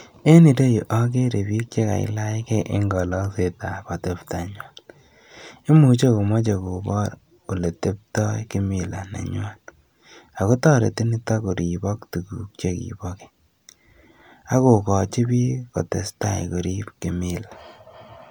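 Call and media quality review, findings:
No faults found in the call audio. Nothing in the speech stream calls for follow-up.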